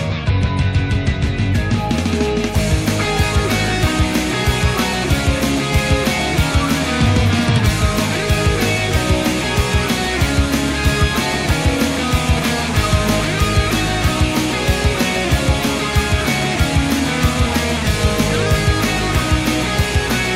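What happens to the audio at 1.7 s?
At about 1.73 to 1.75 s there's a short burst of damaged data in a compressed stream. Some of the encoded bytes there are corrupted, so the decoder misreads those frames, loses sync and hunts for the next valid header. You hear it as a quick chirp, squawk, click or short hole in the sound.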